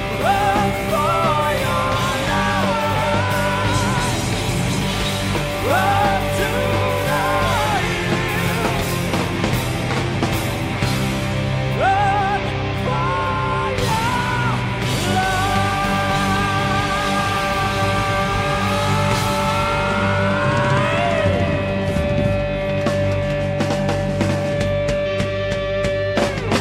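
Mains hum runs through the whole clip, a steady 50 Hz tone sitting only about 10 dB below the sound itself. Power-line current is leaking into the signal path, as from a ground loop or nearby transformer, leaving a constant low drone with some low harmonics above it.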